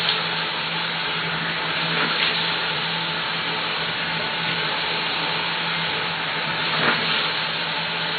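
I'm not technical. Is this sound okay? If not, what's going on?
Yes, this sound is okay, with no technical faults to point out. Nothing cuts out, jumps or gets interrupted anywhere in it.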